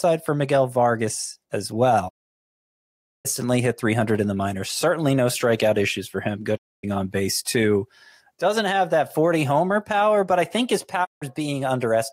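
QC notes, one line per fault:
2.08–3.27 s, 6.56–6.85 s and 11.04–11.24 s: digital broadcast dropout. The speech fades to silence over 20 ms, the first hole lasting about 1.2 s, and resumes further on. The receiver muted while frames were lost or corrupt, so everything sent during each gap is gone.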